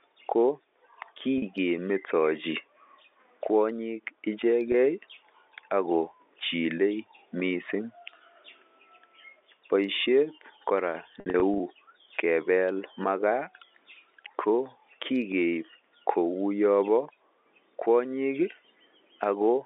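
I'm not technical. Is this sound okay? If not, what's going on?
No. Three times, bits of the sound go missing on the way. This is packet loss with pitch repetition. When a piece is lost, the receiver repeats the last small cycle of the voice to fill the hole. At 1.38 to 1.42 s, about 40 ms is lost. At 4.72 to 4.74 s, about 20 ms. Each sounds like a brief, slightly buzzy hold. From 11.2 to 11.6 s, just before "kebel makaa", short gaps are scattered, the longest about 60 ms.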